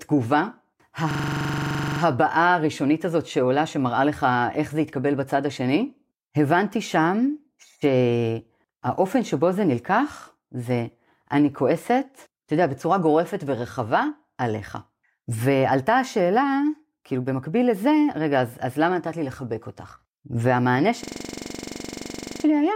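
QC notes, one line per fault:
1.11–2.01 s, system hang loop: one 42.67 ms slice of the speech repeats 21 times at 23.4 Hz, a rattling stutter that fits a stalled 2048-sample ring buffer.
21.04–22.44 s, system hang loop: the same 42.67 ms slice length cycles 33 times at 23.4 Hz, the playback hardware looping its buffer while the system froze.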